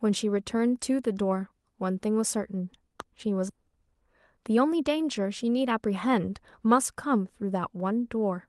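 Right around 3.0 s there's a loud pop, a single sharp click that jumps roughly 10 dB above the speech while the talking carries straight on underneath it. It's over in a couple of hundredths of a second. That kind of spike is most likely an electrical transient, like a connector, a switch or a static discharge, dumping a quick voltage pulse into the signal path, which then gets shaped into that one crisp tick.

Half a second later, at about 3.5 s, there's a skip ahead. Playback just leaps forward with no gap and nothing filling it, and roughly 0.7 s of speech is simply gone. The two sides butt together almost seamlessly. What you're hearing is a chunk of queued audio being thrown away, probably by an overfull jitter buffer, so the delay drops in one go.

From about 3.68 s to 6.69 s there's a jitter buffer speed-up. The speech runs at roughly 106% of its normal pace but keeps its pitch, so it comes across as slightly rushed rather than chipmunky. 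The receiver is trimming out tiny pitch-period slices over and over to drain the extra backlog, shaving off something like a fifth of a second in total. All of this rides on a call codec path whose top end stops around 12 kHz, which fits Opus at about 24 kbps.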